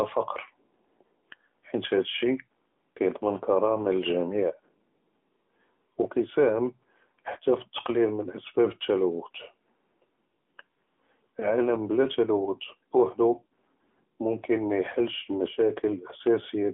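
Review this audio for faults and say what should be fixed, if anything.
AMR narrowband mobile codec: the speech passed through AMR-NB at a mode that sounds like 10.2 kbps, leaving only 200 Hz to 3.4 kHz, with plainly audible buzzy, synthetic coding throughout. Prevent it by carrying the call over a wideband or higher-rate codec path.

Lost AMR speech frames: between 11.40 and 11.51 s the decoder concealed what sounds like a single dropped 20 ms frame, producing a brief dip or warble. Prevent it with better radio coverage or stronger error protection on the link.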